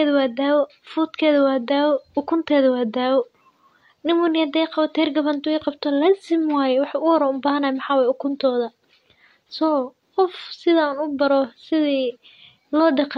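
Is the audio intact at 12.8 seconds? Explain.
Yes, the speech at 12.8 seconds plays through intact, with no dropout, click, distortion or other fault at that point.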